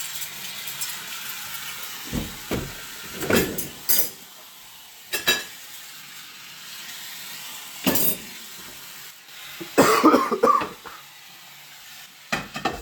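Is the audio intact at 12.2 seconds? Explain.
No. At 12.2 seconds the sound sits inside a drop from 12.06 to 12.73 s. The level falls abruptly by about 6 dB and stays down until 12.73 s, then recovers. This is most likely one channel dropping out. One side of the stereo pair goes silent. When the two sides are summed to mono, anything they share loses half its contribution. Anything carried only by the missing side vanishes for that stretch.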